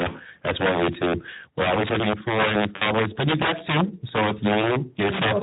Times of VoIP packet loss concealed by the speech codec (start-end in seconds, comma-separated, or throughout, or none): 2.75-2.91, 4.61-4.73